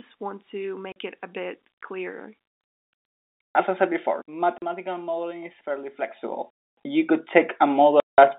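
At 0.92 s there's a 40 ms hole of dead silence with hard edges. That's packet loss filled with silence, and the gap length points to a couple of 20 ms packets dropped and nothing concealed. From 3.29 to 4.78 s the level slides down by roughly 15 dB in 1 dB jumps, about ten a second, with no smoothing, so you get zipper noise ticking along under the speech. Near the end of that, at 4.58 s, another 40 ms silent gap cuts in. Then from 6.01 to 6.48 s the level climbs back up by roughly 15 dB, again in 1 dB steps but faster, around thirty a second, so the zipper ticks faster. The clip ends with the longest dropout, 180 ms of silence from 8.0 to 8.18 s, which fits about nine packets lost in a row. All of it sits inside a narrow telephone band running on G.711 coding.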